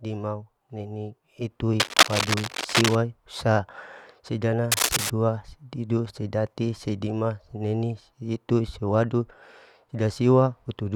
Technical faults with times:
1.80-2.97 cable scratch noise
4.72-5.11 cable scratch noise

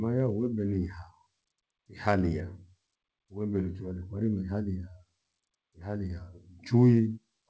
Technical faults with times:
none

